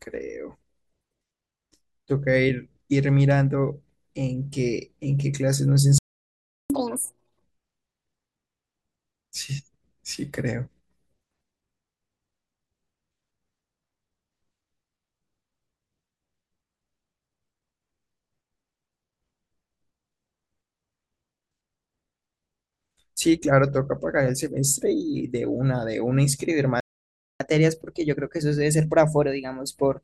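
At 5.98 s the speech just cuts out for about 0.72 s, until 6.70 s. That's a playback stall. The player most likely ran dry or had its thread blocked, so nothing reached the output. Right after, from 6.70 to 7.42 s, you get catch-up at higher speed. The backlog is resampled at 2.0x, so the voice rushes and jumps up by roughly ten semitones, almost an octave, giving it a chipmunk quality before it snaps back.

The same thing happens near the end. At 26.80 s there's a second stall, about 0.6 s of silence until 27.40 s, again likely from the player starving or blocking. The catch-up after it is much gentler. From 27.40 s right through to the end the speech runs at 1.1x, about a semitone and a half sharp. It never settles back before the clip ends.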